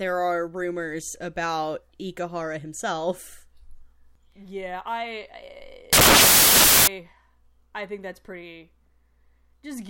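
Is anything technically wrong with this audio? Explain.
Yes. From 5.93 to 6.87 s the speech gets buried under a burst of loud broadband noise. That's samples built from the wrong bytes. For a bit under a second, the reader is assembling each sample out of mismatched bytes, whether that's an offset of one byte, swapped byte order or the wrong alignment. The jittery low-order bits end up as the big part of every value, so you get harsh broadband hiss.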